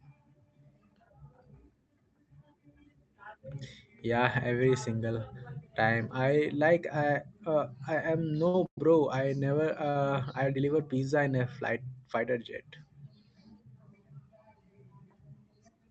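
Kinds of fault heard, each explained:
Repeated stalls (stutter) at 8.37 to 8.87 s: packets arrived late four times in quick succession, so the jitter buffer kept running dry and the receiver stretched the last sound to cover the gaps, about 190 ms in all, the longest 112 ms, giving a dragging, stuttering half-second with nothing lost.
Short stall from a late packet at 9.90 s: one packet missed its slot, the buffer emptied, and the receiver held the preceding sound for 56 ms until it arrived, then resumed exactly where it left off, just before "I deliver pizza in", with a brief held moment and a slight buzz or dip.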